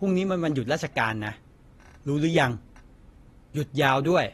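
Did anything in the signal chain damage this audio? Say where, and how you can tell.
Yes, at the codec stage, likely AAC compression. The speech sounds dull and smeared throughout. Nothing reaches above 12.4 kHz, fitting a 32 kbps bitrate.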